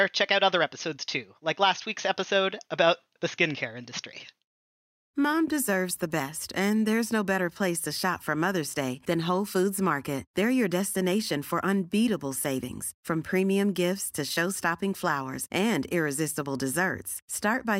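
Listening closely to the speech recording, nothing stood out as a technical fault at any point.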